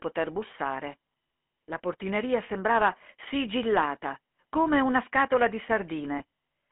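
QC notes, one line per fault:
throughout: GSM full-rate codec. The speech has a buzzy, gravelly grain over a 200 Hz to 3.4 kHz line band, which suggests the 13 kbps full-rate coder. Its coarse pulse excitation roughens the voice itself, unlike a plain band-limited telephone line, which stays smooth.
6.18–6.21 s: lost GSM frames. A brief rough, metallic ring holds the sound where the decoder repeated the last good frame's settings, which fits one lost 20 ms frame. It is a smeared hold rather than the silent gap or click of a dropout.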